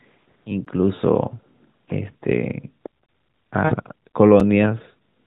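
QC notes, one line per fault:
0.65 s and 4.40 s, block of digital silence: output buffer went unfilled, so the sound cut out; 16 ms and 5 ms holes, the second fitting a 256-sample buffer.
0.95–1.02 s and 3.65–3.75 s, lost AMR speech frames: corrupted frames were concealed from earlier pitch and vocal tract settings, so 40 ms, then 60 ms, of speech smears and fades before recovering roughly.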